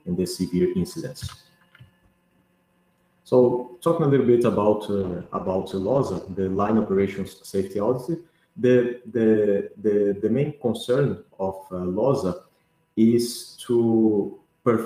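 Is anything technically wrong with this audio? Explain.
Yes. From 5.01 to 9.71 s there is a call bitrate drop: the encoder was starved of bits and coded more coarsely, consistent with a fall from about 64 kbps to 13 kbps. The sound turns rough and muffled, worst for roughly 1.9 s, then recovers.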